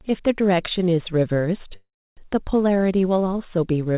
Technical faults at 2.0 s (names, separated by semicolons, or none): call audio freeze